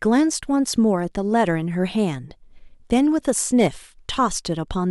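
At 3.59 s to 3.66 s the speech runs into hard clipping for roughly 70 ms. The level there exceeds what one stage in the chain can represent, by about 4 dB, so the waveform peaks are sliced off flat instead of following their natural curve. Those squared-off tops generate harmonics well above the speech band, heard as a brief, gritty crackle riding on the peaks there.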